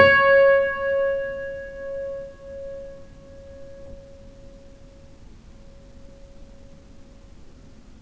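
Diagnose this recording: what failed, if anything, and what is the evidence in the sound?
At 3.86 s the everyday sound jumps forward with no gap and no silence: about a second of audio is simply missing, and the two sides are butted together. This is a skip ahead in the jitter buffer or network stage. A packet-loss dropout would leave a gap or concealment fill instead.

From 3.95 s to the end at about 8.0 s, the sound runs roughly 9% fast while its pitch stays the same. This is jitter buffer speed-up: the receiver trimmed pitch-period-sized pieces to shed nearly half a second of backlog. Resampling drift would shift the pitch as well.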